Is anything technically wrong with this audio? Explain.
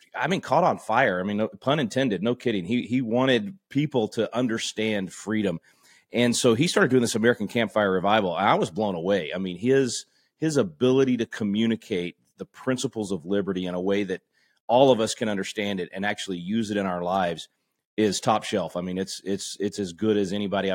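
No, the recording carries its speech without any audible technical fault.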